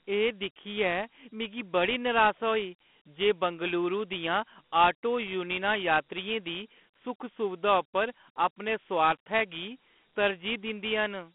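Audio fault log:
Throughout, Dialogic VOX ADPCM: the speech sits in a 200 Hz to 3.4 kHz phone band with nothing above 3.8 kHz, and gritty hiss rides along with it from coarse 4-bit steps, which fits a 32 kbps stream.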